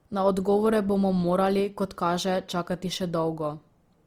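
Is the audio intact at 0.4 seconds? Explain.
No. At 0.4 s, as throughout, the speech sounds grainy and rough, likely from Opus compression in music mode filling starved bands with noise, consistent with about 24 kbps.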